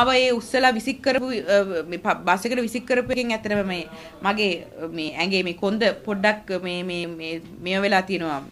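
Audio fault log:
1.18, 3.13, 5.09 and 7.04 s, audio missing between chunks. The sound skips forward four times at a steady spacing of just under 2 s. Each skip drops a fragment of about a twentieth of a second. The two sides butt together with no silence, so each join lands as a small jump. The likely cause is a recorder or processor working in 2 s chunks and losing a sliver at each changeover.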